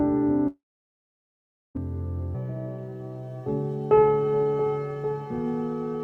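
The audio cuts out from 0.47 s to 1.77 s in a long network dropout, likely from lost packets. About 1.28 s never arrives. A brief fading buzz carries the last sound before roughly 1.16 s of silence, which distinguishes it from a clean edit gap. From 2.35 s to the end, the section plays at the wrong speed, 1.46 times too fast, likely from a clock mismatch. Pitch rises about seven semitones while tempo hurries in step, unlike a pitch shift, which would leave the timing intact.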